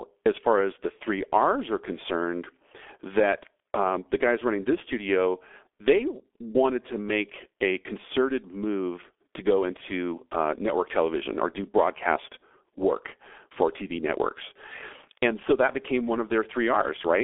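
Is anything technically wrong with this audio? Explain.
Yes. Throughout the speech, the G.723.1 codec has squeezed the signal into a very low-rate telephony stream, consistent with roughly 6.3 kbit/s, coding it in long 30 ms frames whose voice model lags behind fast changes. The line passes only about 300 Hz to 3.5 kHz, with nothing above 3.7 kHz. The result is heavily damaged: muffled and hoarse, with smeared, indistinct consonants and no bright high end.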